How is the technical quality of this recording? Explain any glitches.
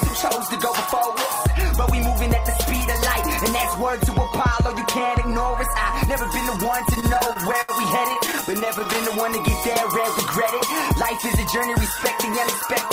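The recording has two bursts of repeated stalls (stutter). From 6.95 to 7.72 s there are nine stalls totalling 171 ms, the longest 75 ms. From 8.09 to 8.97 s there are thirteen shorter ones, none over 13 ms. Late-arriving packets kept draining the jitter buffer, so the receiver stretched the last sound, fading it during the longer waits. Nothing is lost, but the audio drags and judders.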